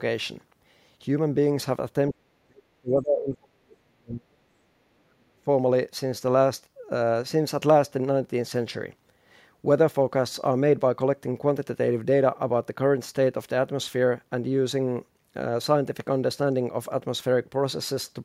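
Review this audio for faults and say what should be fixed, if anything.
The speech is turned down, by as much as 40 dB, from 2.12 to 4.5 s and again from 5.04 to 5.48 s. This is likely speech suppressed in double talk, where the echo canceller ducked the talker while the far side was also speaking. To prevent it, tune the echo canceller's double-talk detection so near-end speech is kept when both sides talk at once.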